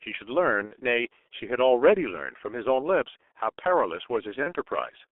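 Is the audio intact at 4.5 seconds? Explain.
No. From 4.43 to 4.53 s the speech is stretched into a sound that fades, then stays weak for a moment after. This is VoIP packet loss concealed by the speech codec: a gap that fits one lost 30 ms frame was filled by repeating the last pitch and filter at falling gain, and the decoder needed time to recover.

Around that moment the speech also sounds muffled and hoarse, with blurred consonants and nothing above about 3.5 kHz or below 300 Hz. That is the G.723.1 codec, whose heavy damage points to a rate near 6 kbit/s and a slowly updated voice model.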